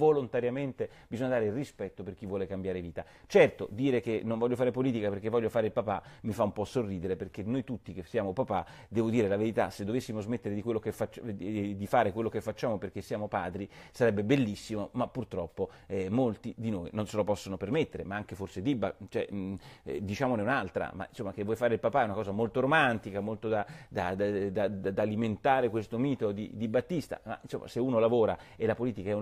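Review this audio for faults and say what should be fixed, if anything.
Nothing here needs fixing; no faults can be heard.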